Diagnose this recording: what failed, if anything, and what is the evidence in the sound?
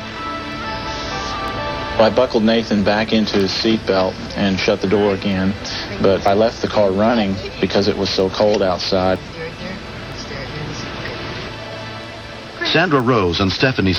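Word clock ticks, at the digital link between devices: short sharp ticks of uneven strength recur about once a second from 0.52 s to 13.96 s, roughly fifteen in all. The receiver runs on its own clock. Each time it drifts a full sample against the sender, which points to an error of roughly 20 ppm, one sample is dropped or repeated. The metronomic spacing and the absence of any audible gap set this apart from network dropouts or buffer underruns.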